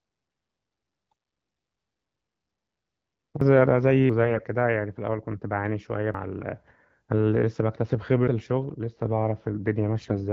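At 3.41 s a sudden jump forward in the speech marks a dropped buffer (overrun), most likely caused by the program failing to collect its samples before the hardware overwrote them. Roughly 150 ms of audio vanishes and the two sides butt together with no gap. The same skip recurs at 4.10 s, losing about 300 ms, then at 6.14 s and 8.28 s, each losing about a tenth of a second.

From 4.24 to 4.44 s, and again from 10.00 to 10.15 s, AMR bit errors make the speech hoarse, scratchy and gargly while its pitch and loudness stay roughly in place. On a weak link, around one in ten of the less protected bits in the wideband AMR frames arrived flipped. The checksum on the critical bits still passed, so the decoder accepted the frames and placed excitation pulses and fine gain and spectral values wrongly.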